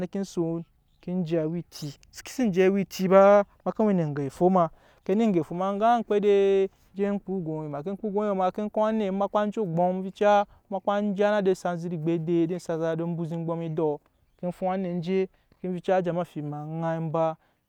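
No technical faults occur at any point in the speech, so there is nothing to describe in time order.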